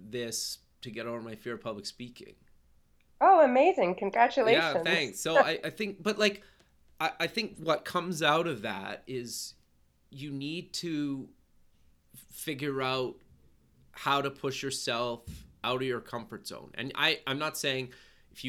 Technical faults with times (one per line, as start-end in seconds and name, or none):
none